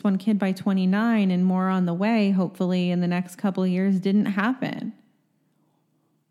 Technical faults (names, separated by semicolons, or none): none